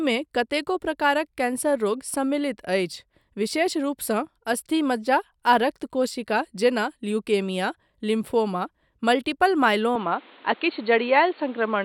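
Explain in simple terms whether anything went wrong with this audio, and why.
Near the end, from about 9.96 s, the speech suddenly turns dull and boxy, losing everything above roughly 4.4 kHz, with a faint new background hiss and no gap. That's most likely an input switched to a poorer device, like a headset's narrower call mode.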